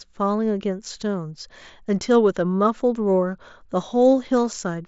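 Speech carried over a Bluetooth mSBC headset link, with the content stopping near 7.7 kHz as that wideband codec dictates, and no faults to report.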